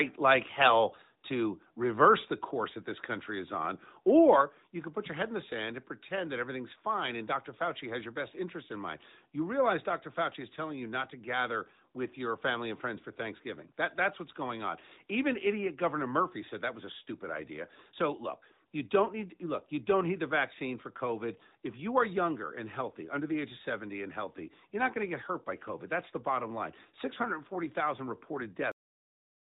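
At 4.41 s, just before "you can put your", the whole level drops by about 5 dB in one step. This is likely a microphone volume stepped down by the call software. The waveform envelope shrinks abruptly.

Around 21.38 s there is a brief dip and warble, consistent with a single lost AMR speech frame of about 20 ms. The decoder repeats its last settings at reduced gain, which shows as a short, smeared, fading patch in the spectrogram. The spectrogram is capped near 4 kHz by the narrowband codec.

At 28.72 s the sound has a cut-off end, stopping mid-sound into flat digital silence with no decay tail. The waveform ends in a straight line.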